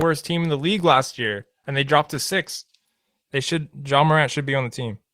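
After "team in the league", from 0.92 s to 3.61 s, a call bitrate drop lowers the speech quality. The coarser coding fits an encoder pushed from roughly 32 kbps down to 16 kbps, bottoming out for about 1.9 s, and the sound turns rough and watery until the bitrate recovers.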